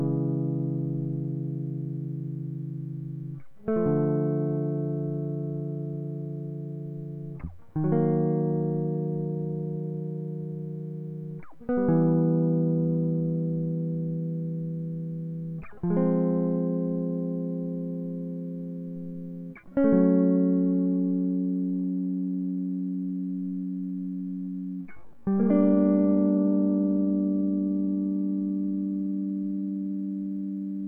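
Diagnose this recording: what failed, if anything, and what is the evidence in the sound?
From 21.69 s to the end, the music abruptly drops to about 0.6 times its earlier pace, yet the pitch doesn't budge. That slowed stretch drags. It's likely a time-stretched section, added in an editing or post-processing step after capture: software lengthened that tail to fill a slot and held the pitch by repeating short slices of the audio.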